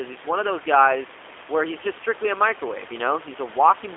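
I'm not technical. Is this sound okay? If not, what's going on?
No. From start to finish the speech has passed through the G.729 codec, a phone-call compressor that rebuilds speech from a simplified model. A plain phone line would only sound muffled, but here everything above about 3.6 kHz is gone and the speech also sounds noticeably rough and synthetic.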